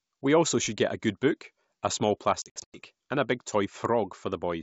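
After "good book a small", from 2.42 to 2.79 s, packet loss on an ADPCM call cuts about 220 ms into hard-edged silent gaps (longest 100 ms). These show as blank vertical strips before "and a big".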